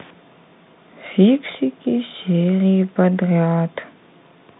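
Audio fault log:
No faults heard anywhere in this speech recording.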